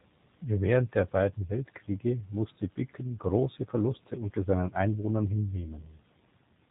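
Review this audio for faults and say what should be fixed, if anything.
G.729 codec damage throughout: the speech is rebuilt from a vocal-tract filter and a few pulses per frame, so it sounds rough and synthetic, with nothing above 4 kHz, which fits an 8 kbit/s codec. Prevent it by using a wideband codec such as G.722 or Opus at a higher bitrate.

VoIP packet loss concealed by the speech codec, 5.80 to 5.90 s: about 20 ms of audio went missing, which points to a single lost packet. The decoder extrapolated a buzzy or noisy, fading fill, and the speech stays weak or distorted for tens of milliseconds or more while it recovers. Prevent it with forward error correction or redundant packets, plus a jitter buffer on a less congested network path.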